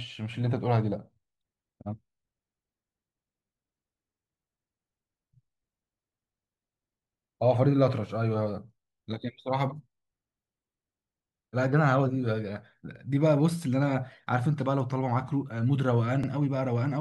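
Overlapping chunks at 16.24 to 16.28 s in this speech clip: near the end, a join between processing chunks about 6.0 s long lets the next chunk begin before the previous one finished, so roughly 48 ms of sound plays twice, heard as a brief stutter.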